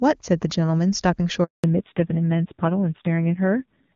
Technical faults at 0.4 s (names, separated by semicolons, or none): none